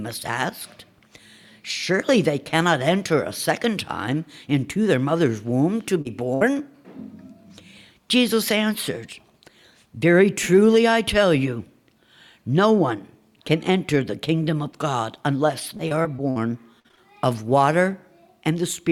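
At 6.01 to 6.07 s a brief smear passes through the sound, a wobble rather than a clean break. This is short concealed packet loss: about 40 ms of audio never arrived in time, and the receiver covered the hole with roughly 33 ms of synthesized continuation, extending the last sound from its pitch or as shaped noise, then blending back into the real signal.

Soon after, from 6.35 to 6.43 s, the sound briefly hangs and fades before resuming slightly further along. This is a burst of packet loss: around 60 ms went missing in a row, and the receiver stretched the preceding sound over roughly 61 ms, turning it down as the gap continued, so the material inside that stretch is gone.

From 15.77 to 16.38 s the audio turns choppy, with small pieces dropping out. This is repeated packet loss (robotic sound). Five separate gaps, the longest 54 ms, add up to about 140 ms lost, and patching covers about a fifth of the span. 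A denser spell follows from 16.80 to 16.99 s. There, four gaps (longest 47 ms) leave nearly half of that stretch synthesized.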